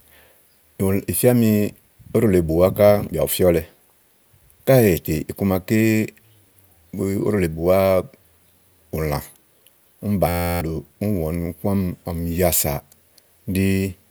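At 10.29 s the speech locks into a system hang loop that lasts until 10.61 s. The machine or driver stalled while the sound hardware kept replaying its ring buffer, so one 11.6 ms slice, which fits a 512-sample buffer, repeats 28 times. Because the slice is so short, it comes across as a steady 86 Hz buzz rather than a stutter, and roughly a third of a second of real audio is gone.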